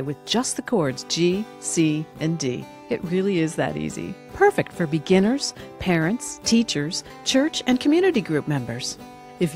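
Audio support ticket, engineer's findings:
No audible faults found; nothing to escalate.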